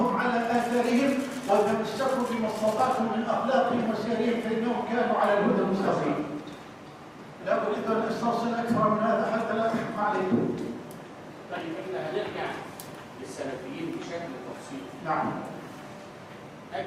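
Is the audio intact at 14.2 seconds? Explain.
Yes, the audio at 14.2 seconds is intact, with no dropout, click, distortion or other fault audible at that point.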